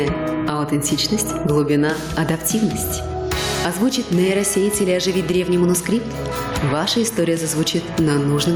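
From start to finish the clip has gain pumping: the level is pulled down on each loud sound, swinging by around 15 dB. The likely cause is input gain set far too high, with a fast limiter clamping down on every peak. Unlike a noise gate, which cuts quiet stretches to silence, here loud and soft parts end up closer in level, and the squashed dynamics breathe audibly rather than sitting at a steady level.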